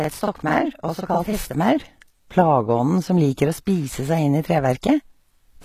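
A speech clip whose treble sounds plainly synthetic throughout. Content stops at 14.9 kHz, and the upper band is rebuilt rather than original, so its harmonics don't line up with those below. This likely comes from HE-AAC compression at a low bitrate, around 20 kbps. Unlike plain lowpassing, this is a replicated top band rather than a simple loss of treble. From 0.00 to 1.55 s a channel delay (doubling) puts a second copy 42.67 ms behind the first, which fits a 2048-sample buffer at 48 kHz. That copy is heard at the same level as a slap or doubling, not the decaying tail of room reverb. At 4.82 s a pre-echo puts a brief hiss about 16 ms ahead of an attack, softening it, because codec noise spread across the block fills the quiet just before the transient.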